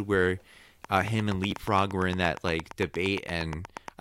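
From 0.85 s to 3.89 s, something injects a steady pulse into the speech, most likely interference from nearby equipment or a faulty connection or power supply. This train of clicks is very regular, at about 8.6 per second, roughly thirty clicks in all, each peaking around 10 dB above the speech. The clicks keep the same sharp shape throughout and tick over the speech and through its pauses alike.

At 1.51 s, new audio fails to reach the device in time, so it plays the last buffer a second time. This repeated buffer lasts 11.6 ms, which fits a 512-sample buffer, and about ten milliseconds of audio is lost as the playback falls behind. The chunk is too small to register as a stutter, so the hard join sounds like a single brief click or buzz.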